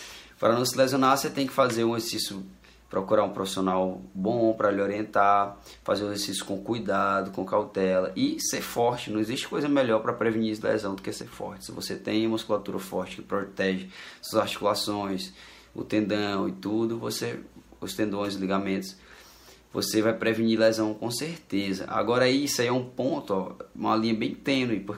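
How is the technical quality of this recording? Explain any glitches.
The recording has one brief glitch. One channel drops out from 11.22 to 11.32 s: for about a tenth of a second the level falls abruptly by about 6 dB. The likely cause is one stereo channel briefly cutting out, so only half the signal reaches the mono sum.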